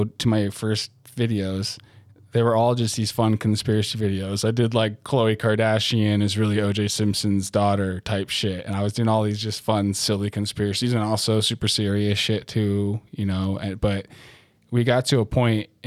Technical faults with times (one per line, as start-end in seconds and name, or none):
none